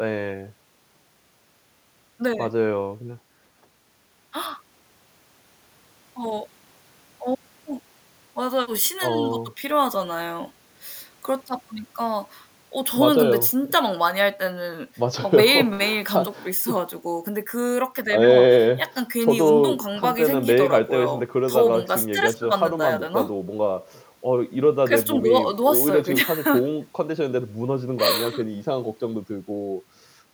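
No technical faults are audible anywhere in the speech recording.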